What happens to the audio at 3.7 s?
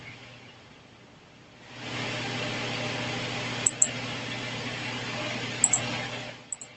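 Right around there the automatic gain control is pumping. From 3.51 to 3.86 s it decides the input is too hot and pulls its gain down by about 9 dB, so the speech and the room background sink together over that third of a second.

Then, finding the input too quiet, automatic gain rising kicks in from 3.76 to 4.23 s, pushing the gain back up by about 6 dB. You hear the speech and background swell back up together, overlapping the tail of the drop and leaving a dip-and-recovery around 3.7 s.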